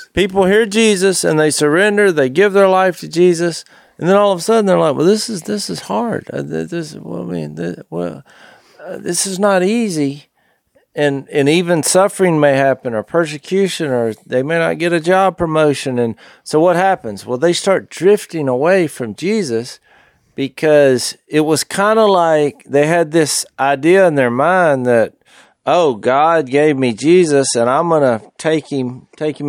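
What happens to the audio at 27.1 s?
You're in the middle of an adaptive stream at a lower bitrate, which kicks in at 25.46 s, right after "in their mind that", and runs to the end. The stream switched mid-flow to a cheaper version, with no gap, just a sudden quality drop. The treble is gone above 11.2 kHz and the speech picks up a swirly, coded edge. That fits a step down from 128 kbit/s to roughly 48 kbit/s MP3.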